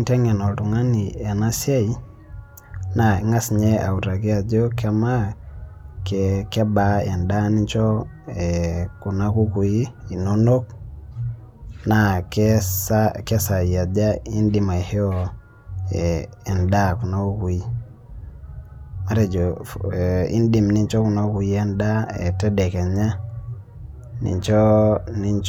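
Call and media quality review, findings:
No audible faults found in this speech recording; no dropouts, distortion, timing or level issues to ticket.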